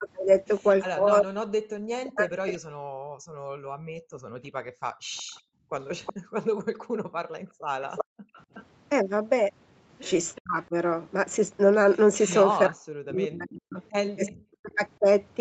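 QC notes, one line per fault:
0.0–2.65 s, 10.38–10.74 s, 12.69–15.01 s, speech suppressed in double talk: the near talker's level sinks by about 40 dB in pieces, for roughly 1.5 s, 0.3 s and 1.5 s of each span. The likely cause is both ends talking at once, so the echo canceller couldn't separate the local voice from loudspeaker echo and clamped both. Unlike background gating, the talker's own speech breaks up, not just the room sound between phrases.
2.93–8.34 s, background gated by the echo canceller: the room tone between and under the speech drops by as much as about 40 dB, for roughly 3 s in all, then comes back. The canceller pulled the microphone down hard while the loudspeaker was active and released it when playback stopped. What sets it apart from double-talk suppression is that the ambience dips and pumps while the foreground speech holds its level.
5.17–6.13 s, 7.95–8.65 s, 12.22–12.45 s, 14.26–14.77 s, echo leak: a separate copy of the voice trails the original by 372 ms. 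It sits about 15, 10, 20 and 30 dB below the speech in those spans. This is likely loudspeaker pickup that the loudspeaker side's echo canceller failed to remove and sent back. The fixed delay and distinct repeat mark it as echo rather than room reverberation, which would smear continuously without a gap.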